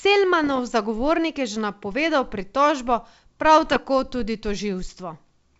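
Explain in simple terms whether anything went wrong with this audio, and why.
Two short rough patches, from 0.44 to 0.60 s and from 3.61 to 3.78 s, are bit errors on an ADPCM link. A few flipped bits throw the decoder's step size and prediction off, so you hear pops and gritty bursts with quick jumps in loudness before it settles.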